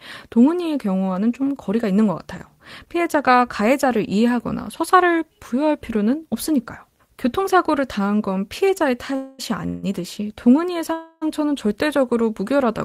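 Speech, with three call audio freezes bunched near the end: 9.15 to 9.41 s, 9.67 to 9.85 s, and 10.93 to 11.24 s. Each time the last bit of sound gets stretched into a fading buzz for roughly 230, 160 and 290 ms, then the talk picks up right where it left off with nothing skipped. It's likely packets stalling in transit and the jitter buffer running dry, so each hold-up just pushes the audio later.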